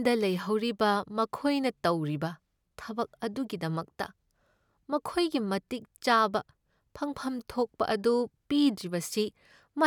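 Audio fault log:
No faults are present in this clip.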